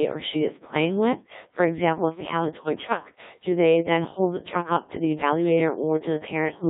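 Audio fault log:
throughout, Codec 2 vocoder: the speech is rebuilt from pitch, voicing and spectral envelope rather than the waveform, which fits about 1.3 kbit/s, so it sounds heavily robotic and buzzy, confined to 150 Hz to 3.7 kHz.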